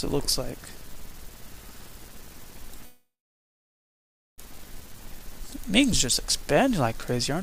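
At 2.85 s the sound stops moving forward and a call audio freeze begins. The last sound carries on briefly as a fading buzz or hiss, then drops to about 1.3 s of silence. The cause is likely delayed packets draining the jitter buffer, leaving the receiver nothing new to play. At 4.40 s the sound resumes exactly where it stopped. Nothing is lost. Everything after that point simply runs about 1.5 s late.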